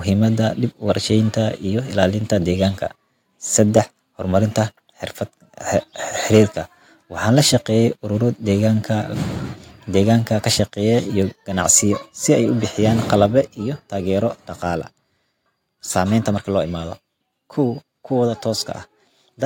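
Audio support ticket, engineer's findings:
Harsh crackle on loudest syllables, 3.6–3.79 s and 6.34–6.41 s. Likely microphone overload: input gain too high, peaks exceeding converter full scale by about 1 dB, then about 3 dB. Waveform shows flat-topped peaks; spectrogram shows broadband smear above harmonics.

Abrupt level drop in voice and background together at 11.22 s and 13.26 s, about 2 dB then about 3 dB. Likely microphone volume stepped down by call software reacting to loud input. Waveform envelope shows a sudden step lower; spectrogram uniformly dimmer afterwards.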